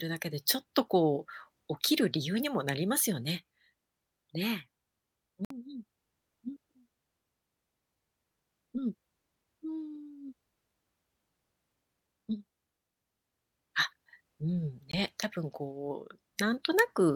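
At 5.45 to 5.51 s and again at 14.92 s the speech cuts to silence for 56 ms and 19 ms, then resumes further on, likely Bluetooth dropouts from late, discarded packets.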